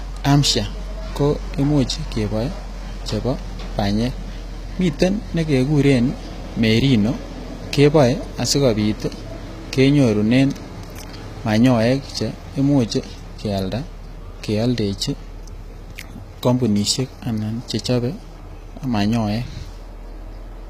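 Throughout, the speech carries plainly audible HE-AAC compression at a low bitrate: treble above the crossover is likely rebuilt by band replication, so s sounds turn gritty and metallic, with nothing above 14.9 kHz.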